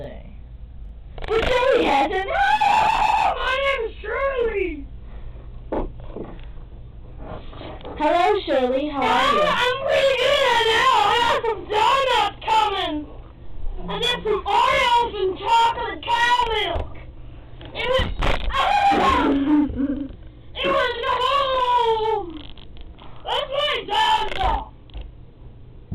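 Channel delay (doubling) runs throughout: one channel arrives 40 ms late and folds into mono, so every onset repeats as an equal-level slap, visible as doubled waveform transients and fine comb striping.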